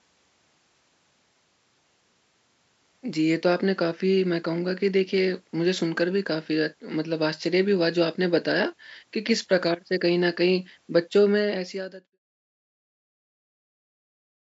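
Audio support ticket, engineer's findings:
No faults found.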